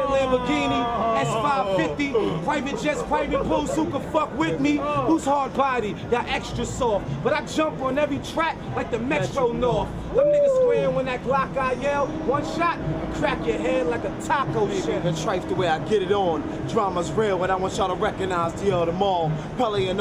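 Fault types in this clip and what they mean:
No technical faults can be heard anywhere in the audio.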